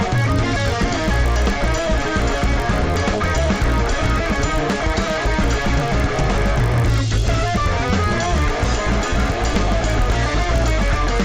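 From start to finish, the sound carries a resampler restarted on every block. The audio was converted in separate 20 ms blocks, which fits a step up from 16 kHz to 48 kHz. At each block edge the converter lacked the true neighbouring samples. So every edge gains a small error. These errors repeat at 50 Hz. The result is a buzz riding on the signal. It is present only while there is sound.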